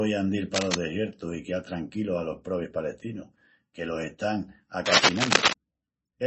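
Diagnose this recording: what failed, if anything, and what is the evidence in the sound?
Codec stage: the speech has nothing above 8 kHz for the whole clip, with watery, swirling artefacts from heavy coding damage. That points to a low MP3 bitrate, around 26 kbps, which is the likely cause. The loss is constant, unlike a network dropout, which would come and go.

Analogue wiring: dense, uneven scratching bursts occur from 0.53 to 0.75 s, at about the level of the speech, and again from 4.85 to 5.53 s, just after "palestinus que los están", noticeably louder than the speech. This is likely cable scratch noise from a worn contact changing resistance, heard as irregular rustling rather than the regular ticks of digital clicks.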